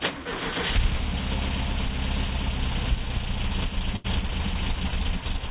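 At 3.96 s the sound breaks up in a burst of packet loss that lasts until about 4.06 s. Roughly 80 ms of audio never arrived, and the receiver covered the hole by extending the last sound it had and fading it out, so a held buzz or thinning hiss replaces the real material. Unlike a plain dropout to silence, the gap is filled rather than empty. Unlike a repeat or stutter, the audio resumes further along with that stretch missing. The call path's 4 kHz ceiling leaves the concealed fill sounding dull.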